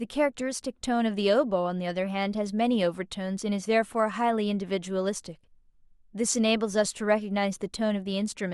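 Listening to this speech recording, nothing stood out as a technical problem at any point.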